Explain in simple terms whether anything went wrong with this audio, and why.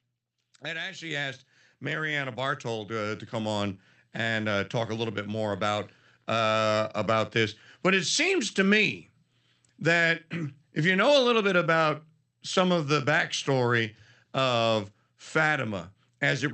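Microphone volume stepped up, at 1.11 s, 2.13 s and 3.15 s, the last one just after "to uh" and right before "to come on and". Each time, the call software decided the microphone was too quiet and turned up its input volume in a single jump. The voice and the background noise get louder together, in three sudden steps about a second apart, with the first jump the largest and the next two smaller.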